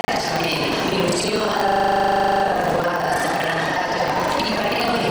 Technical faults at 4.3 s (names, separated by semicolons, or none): buffer tearing